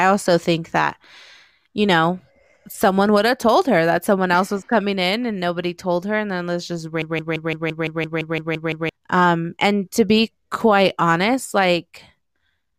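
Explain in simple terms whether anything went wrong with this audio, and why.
Right after "and then this just", a broken-record loop kicks in: a 0.17 s snippet repeats 11 times from 7.02 to 8.89 s, likely a stalled player or stream.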